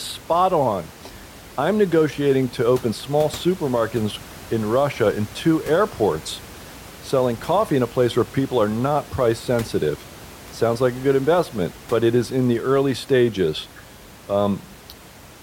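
Speech recording with no technical faults found; the only background is room noise sitting about 20 dB below the speech, which belongs to the recording space rather than the signal chain.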